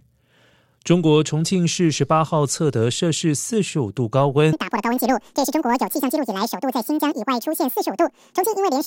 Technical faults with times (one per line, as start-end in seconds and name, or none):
4.53-8.87 audio read two samples at a time (double speed)